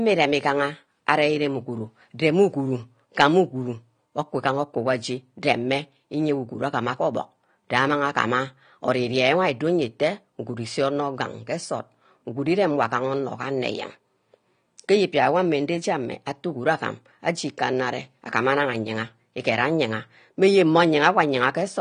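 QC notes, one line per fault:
Throughout, AAC compression: the speech sounds dull and smeared, with nothing above about 9.7 kHz and a fizzy, warbly edge on sibilants, likely from AAC-LC coding at a low bitrate, which fits roughly 32 kbps, throwing away and loosely quantising upper bands.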